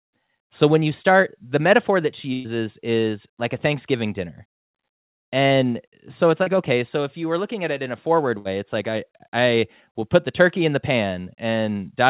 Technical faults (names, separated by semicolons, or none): burst of packet loss; short concealed packet loss